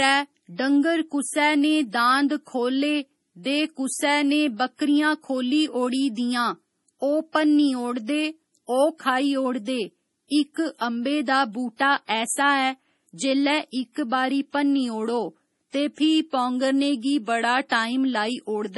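Speech throughout, and it carries heavy MP3 compression damage: nothing above about 11.5 kHz, watery, swirly detail, which fits a bitrate around 32 kbps as the likely cause. There's also pre-echo from 17.69 to 17.71 s, where quantisation noise smears about 23 ms ahead of a sharp attack, so a short hiss precedes it.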